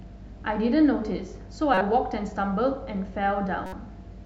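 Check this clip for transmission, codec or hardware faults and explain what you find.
Two short glitches stand out, both corrupt frames that got decoded anyway. The first runs from 1.74 to 1.81 s and spans a few codec frames, giving a fairly loud glitch. The second, from 3.66 to 3.73 s, covers a couple of frames and is much quieter. Flipped bits in the compressed data made the decoder misread gains and codes, so energy landed at the wrong frequencies. Each one comes out as a brief glitch lasting about as long as the damaged frames.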